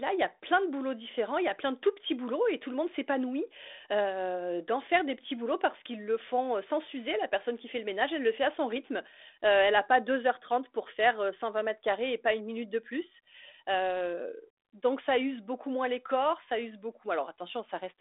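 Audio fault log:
No faults detected in this speech over a 32 kbit/s G.726 telephone link, band-limited to roughly 300 Hz to 3.6 kHz.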